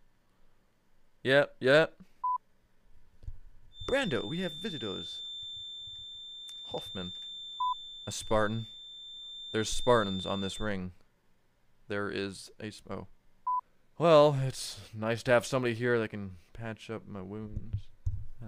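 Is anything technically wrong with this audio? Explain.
Yes. From 3.70 to 10.75 s there is a feedback whistle near 3.6 kHz, roughly 15 dB below the sound. A speaker-to-microphone loop likely held at the edge of feedback. It swells and fades slowly in level.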